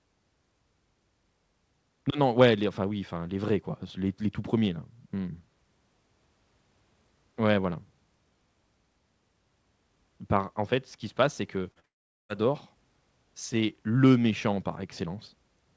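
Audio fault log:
11.72–11.78 s and 11.80–11.85 s, short concealed packet loss: right after "se passe c'est que", two back-to-back gaps of about 40 ms each get patched by stretching the last bit of sound, so you hear a quick smeary wobble twice rather than clean audio.
11.85–12.31 s, long network dropout: then the stream goes quiet for nearly half a second, most likely because the network stopped delivering. The stretched-out sound fades as a brief buzz, about 0.41 s of near silence follows, and the audio picks up again with that stretch simply gone.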